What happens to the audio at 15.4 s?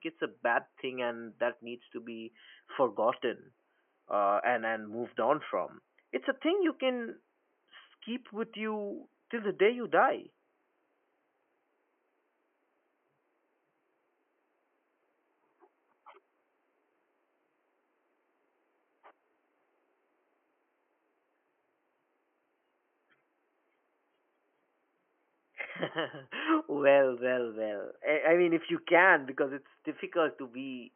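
Nothing goes wrong at 15.4 s: the speech carries on intact, with only the room's own background noise sitting about 47 dB beneath it.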